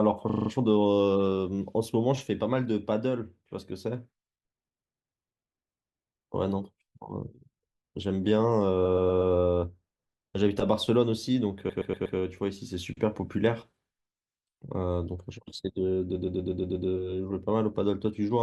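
Repeated frames stutter through this speech at 0.29–0.49 s, 8.85–9.33 s, 11.69–12.17 s and 16.15–16.87 s. A run of compressed frames was sent or written more than once, so the decoder replays the same slice. First a 40 ms block loops five extra times. Later 120 ms blocks repeat four, four, then six extra times, which fits runs of several frames. Each restart is a stutter, and each lengthens the audio by 0.2 to 0.72 s.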